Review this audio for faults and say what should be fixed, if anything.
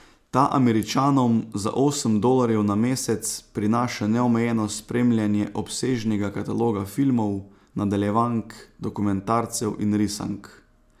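No faults can be heard anywhere in the speech. Nothing needs to be fixed.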